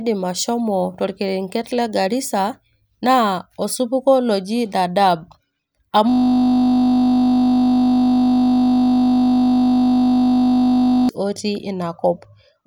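System hang loop from 6.10 to 11.09 s: the system froze while the hardware kept replaying one 20 ms buffer, producing a steady 50 Hz buzz.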